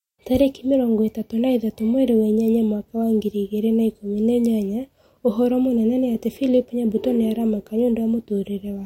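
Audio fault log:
No fault is audible in this speech recording.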